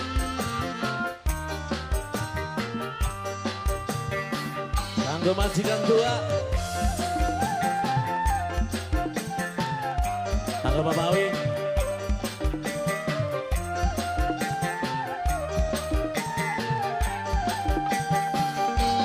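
Periodic USB or driver dropouts from 6.17 to 18.90 s skip a tiny sliver of audio every 0.125 s, producing a steady ticking eight times per second beneath the sound.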